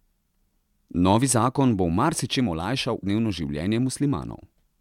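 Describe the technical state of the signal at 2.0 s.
At 2.0 s the speech signal is intact, with no audible fault at that moment.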